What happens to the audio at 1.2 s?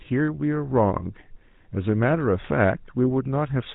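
At 1.2 s the speech is passing through the GSM full-rate codec, as it does for the whole clip. The codec rebuilds speech from a vocal-tract model fed by sparse, regularly spaced pulses and discards everything above 4 kHz. That produces plainly audible buzzy, gravelly roughness, consistent with a 13 kbps GSM stream.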